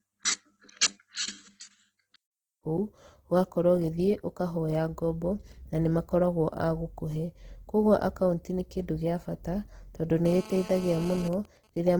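Throughout, the speech has plainly audible codec damage. This is likely Opus compression in its music (CELT) mode, at a rate that fits about 16 kbps. Short of bits, the encoder fills bands with folded or noise content, so tones sound rough and grainy. Bandwidth stays full, reaching to 20.2 kHz.

From 10.26 to 11.28 s, just after "bata tondũ", a GSM phone buzz appears. A nearby 2G phone in a call transmits about 217 bursts per second. The audio circuit rectifies them. The result is a raspy 217 Hz buzz with many harmonics, about 16 dB below the speech.

From 11.33 to 11.94 s, GSM signalling bursts follow. The phone is still in a call, but its user is silent, so it sends only sparse groups of bursts. These come through as even ticks with a longer 217 Hz buzz twice a second, roughly 25 dB below the speech.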